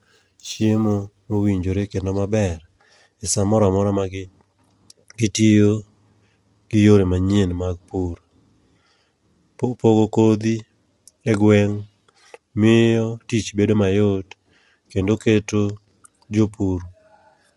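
From 0.0 to 1.5 s, up to "kendo maber", sample clock jitter adds a faint hiss. The converter samples at slightly wrong moments, leaving error around 40 dB down.

Throughout, the speech sounds rough and grainy, with nothing above 11.7 kHz. The likely cause is low-delay AAC compression, probably AAC-ELD at around 32 kbps.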